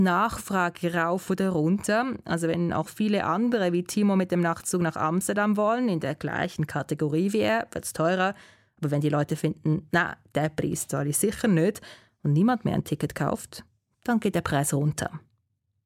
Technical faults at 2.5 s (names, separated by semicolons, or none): none